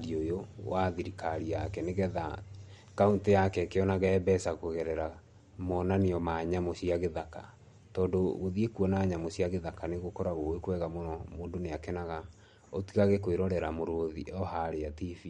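From start to finish the speech carries plainly audible MP3 compression damage, likely from encoding at a low bitrate that fits about 48 kbps. Starved of bits, the encoder discards all content above 11.2 kHz and drops weaker frequency lines that flicker in and out between frames, giving a watery, swirling edge to the sound. On a spectrogram this appears as a hard horizontal ceiling at 11.2 kHz with patchy, blocky gaps below it.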